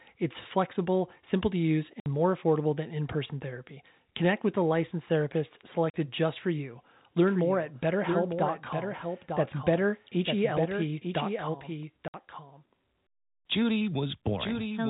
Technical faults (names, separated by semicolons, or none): packet loss filled with silence; doubled audio track